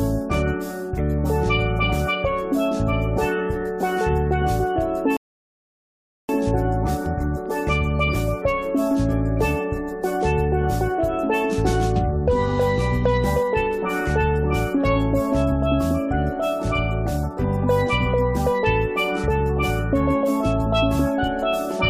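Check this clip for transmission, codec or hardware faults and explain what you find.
One transmission fault is present. At 5.17 s there is a rebuffering stall. Playback starved for data and paused until 6.29 s. The sound drops to silence for 1.12 s, then continues where it stopped.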